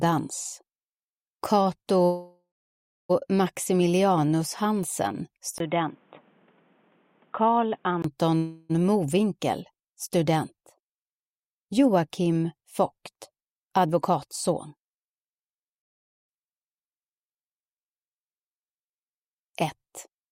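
From 2.05 to 3.11 s, a likely call audio freeze: delayed packets starved the jitter buffer, so the audio stalls, trails off into about 600 ms of silence, then resumes intact. From 5.58 to 8.04 s, the input likely switched to a poorer device: a 20 ms dropout, then dull, band-limited sound with nothing above 3.8 kHz and a faint added noise floor. A second call audio freeze, likely from another packet stall, holds the sound from 8.37 to 8.71 s as a fading continuation with no silence. From 13.30 to 15.11 s, a jitter buffer speed-up trims about 150 ms of surplus buffered audio, so the sound runs 7% faster at unchanged pitch and feels hurried.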